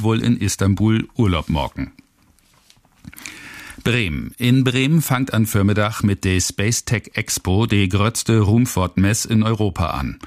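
No technical faults can be heard anywhere in the clip. Nothing in the audio stands out as a defect at any point.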